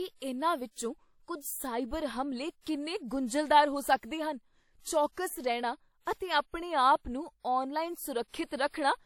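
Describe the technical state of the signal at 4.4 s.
At 4.4 s, as throughout, the speech carries the artefacts of an earlier encoding with nothing above 18.9 kHz, likely low-bitrate audio saved at a high bitrate that cannot restore the lost detail.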